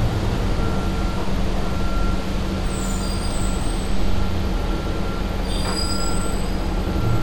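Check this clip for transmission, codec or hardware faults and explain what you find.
Nothing here points to a transmission, codec or hardware problem; the sounds come across steady and intact the whole way, with no dropouts, glitches or odd artefacts to flag.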